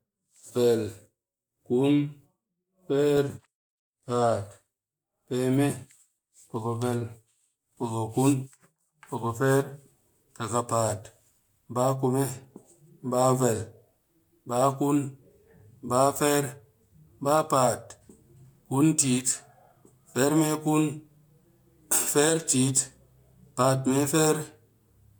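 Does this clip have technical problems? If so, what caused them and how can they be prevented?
No, this speech recording has no audible technical problems.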